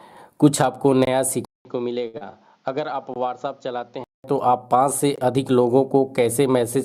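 At 1.05–1.07 s the sound drops out for 20 ms. This is a gap between chunks. The audio arrived in pieces of about 2 s, and a stretch of silence sits at each join. Nothing is lost. The flow simply breaks. The same hole returns at 3.14–3.16 s and at 5.16–5.18 s, spaced roughly 2 s apart.

At 1.45 s there is a silence of about 200 ms. Then the sound comes back duller and quieter, by around 10 dB. Nothing reaches above 7.2 kHz now. New background noise appears, roughly 40 dB under the signal. This is most likely an input switched to a poorer device, such as another microphone or a headset call profile. Its narrower band and own noise floor change the tone at once. The fuller sound returns at 4.24 s.

At 2.07–2.17 s one sound is held too long. This is a short stall from a late packet. The packet came 62 ms late, and the jitter buffer ran dry. The receiver stretched the last sound over those 62 ms, then carried on from the same point. 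Nothing goes missing, but there is a slight buzz or dip.

At 2.18–2.32 s there is a short concealed packet loss. About 40 ms of audio never arrived in time. The receiver bridged the hole with 29 ms of synthetic continuation built from the preceding sound, then blended back in. A small extra delay of around 15 ms comes with it. The passage sounds briefly smeared or wobbly.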